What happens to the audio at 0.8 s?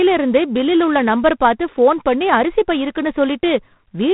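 G.726 ADPCM coding is present at 0.8 s, as it is across the whole clip. Rather than the speech waveform itself, each sample carries only a few bits describing its difference from an adaptive prediction. The coarseness here points to the 24 kbit/s mode, which leaves a plainly audible, harsh rasping hiss that rises and falls with the speech level. Nothing passes above about 3.9 kHz, so the sound is narrow and telephone-like.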